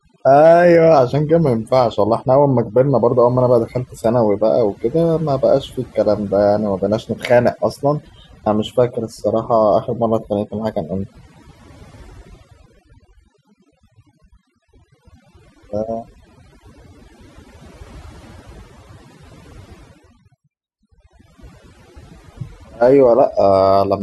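Overdone noise removal runs through the whole speech clip: a noise reducer set far too aggressively pulls individual frequency bands down whenever they sit close to its noise estimate, taking quieter voice detail along. Pauses drop to near silence sprinkled with twinkling specks.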